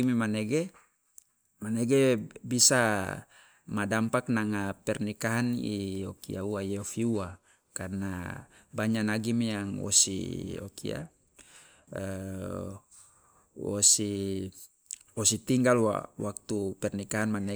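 No technical faults can be heard anywhere in this recording.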